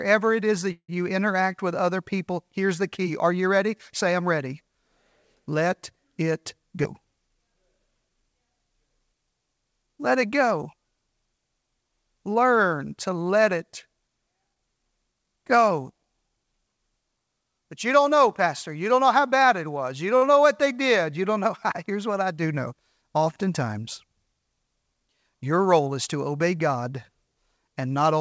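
Right after "it is that", from 0.72 to 0.90 s, there is a call audio freeze. The last sound carries on as a fading buzz for about 165 ms, with 70 ms of it silent. The likely cause is delayed packets emptying the jitter buffer. Nothing is lost, but the gap pushes everything later.

At 6.83 to 6.86 s comes a skip ahead. Roughly 70 ms of speech is dropped. The two sides are joined almost directly, so the speech lurches forward.

From 7.23 to 8.40 s, a jitter buffer slow-down plays speech at 94% speed. Repeated pitch periods add 69 ms. Sounds drag at unchanged pitch.

From 14.54 to 16.53 s, a jitter buffer speed-up runs at 108%. Short pitch-period cuts remove about 150 ms. The speech sounds hurried, though its pitch holds.

At 20.17 to 20.23 s, just before "know what they did", a short stall from a late packet holds a sound 47 ms too long. It leaves a slight buzz or dip, and nothing goes missing.

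From 25.43 to 25.80 s, leading into "is to obey", a second speed-up runs at 112% and trims about 50 ms. Throughout the clip, the call path's band stops at 8 kHz, which fits G.722.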